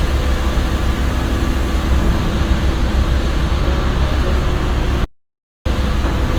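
From the start, the everyday sounds carry plainly audible Opus compression damage. Textures turn rough and grainy, and tonal parts pick up a noisy edge. The encoder seems to be in its music mode. It keeps each band's energy and patches starved bands with folded or noise-like content. Few holes appear, so there is little swirl. The full band survives up to 20.1 kHz. The roughness likely points to a low rate, around 24 kbps.

At 5.05 s the audio drops out to silence, and it returns at 5.66 s. The gap lasts about 0.61 s. It is dead digital silence, with no room tone or background underneath. The sound stops abruptly and restarts just as abruptly. Whatever happened during that span is lost. The likely cause is a momentary loss of input, with silence written in its place.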